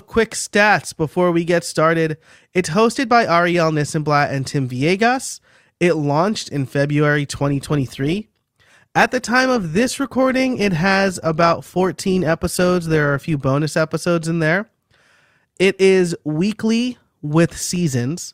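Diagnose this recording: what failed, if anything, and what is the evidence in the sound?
Adaptive stream at a lower bitrate, 7.39 to 13.39 s: network slowdown forced a sudden, gapless switch; codec artefacts rise, consistent with Opus dropping from 64 to about 24 kbit/s.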